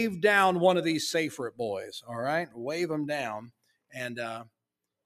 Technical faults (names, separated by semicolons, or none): noise suppressor applied to music or sounds; sound cut by the noise suppressor